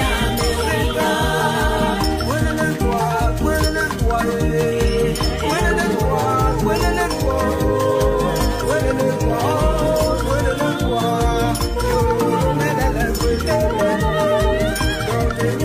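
No technical faults can be heard anywhere in the audio, and the signal stays steady and intact throughout.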